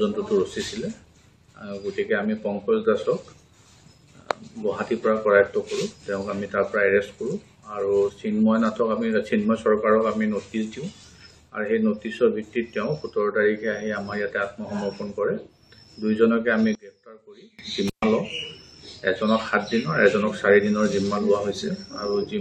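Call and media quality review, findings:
16.75 to 17.59 s: level collapses by about 28 dB, leaving a faint residue with the common content nearly gone. Likely one channel inverted, common signal cancelling in a mono sum. Unlike a dropout or gain fault, what remains is only the channel difference, not silence or a uniformly quieter signal.

17.88 to 18.04 s: brief cut, about 127 ms open, crackle at both edges, faint hiss in the gap. Intermittent contact, a loose plug or cable momentarily breaking the line. Distinct from a packet-loss gap: the edges are crackly and noisy, not a clean or concealed splice.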